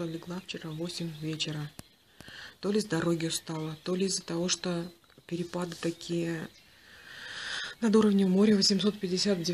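No dropouts, distortion, timing glitches or level problems can be heard anywhere in the recording.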